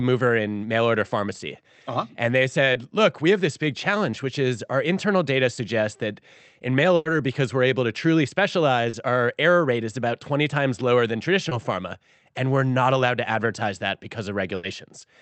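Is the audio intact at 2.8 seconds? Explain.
No. A short concealed packet loss runs from 2.73 to 2.77 s. About 20 ms of audio arrived too late for the decoder. The receiver filled the gap by extending the preceding sound, then blended back. It is heard as a brief smear or wobble.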